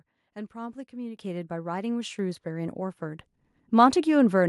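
At 1.17 s the speech and the room behind it jump up together by about 9 dB, then climb again at 2.19 s by about 5 dB and at 3.21 s by about 4 dB, each step landing abruptly. This is the microphone volume stepped up: the call software judged the input too quiet and raised the device's input level in discrete jumps, roughly once a second, so everything captured gets louder at once.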